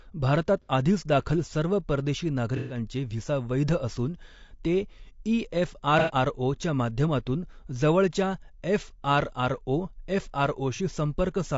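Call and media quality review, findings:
Speech sounds rough and grainy throughout, with noise filling in between the harmonics and a thin, synthetic-sounding top end. This is likely low-delay AAC compression, AAC-ELD at around 32 kbps. The short frames resolve pitch poorly and starve the bits.

AAC frame loss with concealment shows up as brief smeared, noisy patches at 0.62–0.69 s, 2.57–2.77 s (between "दाखल सर्व परदेशी" and "व्हिसा वैध असून ते"), 5.99–6.13 s (after "वैध असून ते ई") and 10.76–10.80 s. The decoder is guessing from the last good spectrum for roughly 30 to 120 ms each time.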